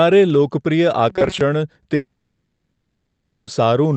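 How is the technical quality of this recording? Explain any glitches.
The recording has two clear glitches, both heard through the coding of a call path whose content stops around 8 kHz.

From 1.10 to 1.41 s there is robotic sound from repeated short buffers. The speech hardens into a rigid metallic buzz at 188 Hz, which fits a buffer of roughly 5.3 ms being replayed. The likely cause is that new audio arrived too slowly, so the last fragment was looped for about half that stretch while the real audio was skipped. On a spectrogram this shows as evenly spaced horizontal harmonic lines locked at 188 Hz and its multiples, ignoring the natural pitch movement. The waveform shows an identical short cycle repeating.

From 1.95 to 3.50 s there is a long network dropout, with about 1.5 s of audio never heard. The likely cause is that no packets reached the receiver, so the decoder stretched the last sound into a fading buzz or hiss. 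After that, roughly 0.45 s of near-silence follows before speech resumes, with the lost portion simply absent. A spectrogram shows smeared, decaying bands followed by an empty gap. The waveform shrinks to a tapering envelope and then flat line.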